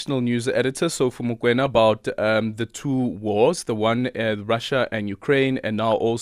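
Speech with two short bursts of DAB burbling, at 1.59 to 1.78 s and again at 5.85 to 5.99 s. Weak reception let bit errors slip past error correction into the MP2 data, at a rate that sounds like a fraction of a percent, so wrong samples put short blips of noise into individual sub-bands. A spectrogram shows blocky, isolated band-shaped patches flickering on and off, and the waveform shows brief irregular bumps.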